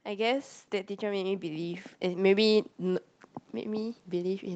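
From 0.05 to 3.09 s there's automatic gain rising: the gain control decided the input was too quiet and pushed it up about 9 dB, so voice and background swell together. It starts climbing again at 3.62 s through the end, heard through call-style audio topping out around 8 kHz.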